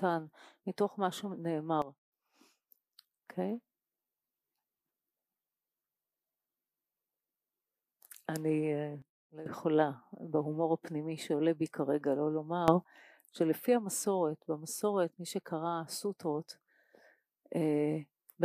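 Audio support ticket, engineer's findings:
Sudden gain jumps at 1.82–2.12 s (down about 12 dB), 9.02–9.46 s (down about 15 dB), 12.68–12.84 s (up about 12 dB). Level and noise floor step together with no ramp, unlike a compressor; likely an unsmoothed digital gain change.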